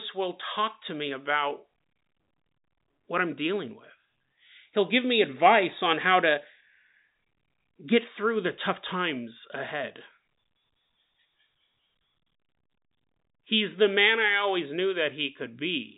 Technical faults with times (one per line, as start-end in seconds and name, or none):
none